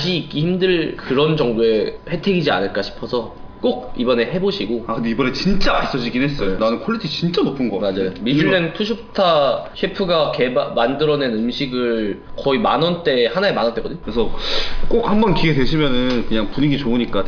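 No technical faults are audible.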